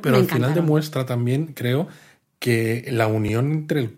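At 3.28 s, right after "demuestra también creo que", a block of samples about 5 ms long was replaced by zeros, a block of digital silence. Because the speech drops abruptly to nothing and returns with no fade, this short hole registers as a tick or dip rather than as silence.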